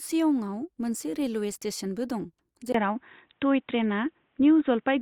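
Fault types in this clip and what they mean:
Input switched to a poorer device: At 2.72 s, right after "मोनसे रेलवे स्टेशनबो दं", the speech turns dull and boxy and stays that way to the end. A brief gap of about 20 ms marks the change. From there, nothing above 3.8 kHz comes through. The level shifts by a few decibels, and a faint new noise floor appears far below the speech. This likely comes from the recording input moving to a narrower-band microphone or headset.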